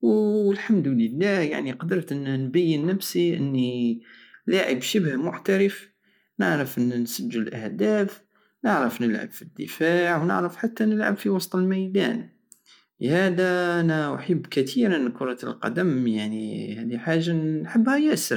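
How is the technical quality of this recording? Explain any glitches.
No glitches can be heard in the recording: the speech signal stays continuous and intact, with no interruptions, dropouts or other technical disturbances anywhere in it.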